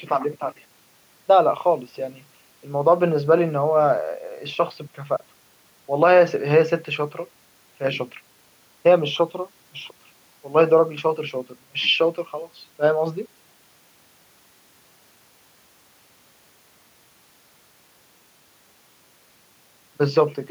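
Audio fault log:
No fault found in this speech clip.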